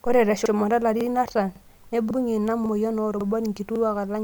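Speech with overlapping chunks: 50 ms replays as stutters at 0.46, 1.01, 1.56, 2.11, 2.66, 3.21 and 3.76 s, as 0.5 s chunks each restart before the last ends.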